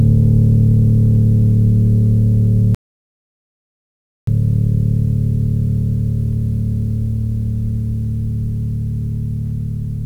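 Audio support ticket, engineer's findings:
Audio dropout to silence, 2.75 s to 4.27 s. Music cuts out mid-flow, then resumes abruptly; gap roughly 1.53 s of silence, no room tone or noise floor. Input signal lost while recorder kept writing samples. Likely cause: momentary device disconnect, failed link, or stray mute upstream of the encoder. Musical content in that window unrecoverable. Check cabling, interface connection and mute automation around the capture path.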